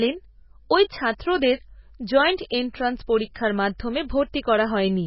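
Throughout, likely heavy MP3 compression at a bitrate that suggests about 16 kbps cuts everything above 5.5 kHz, leaving the speech muffled, watery and swirly.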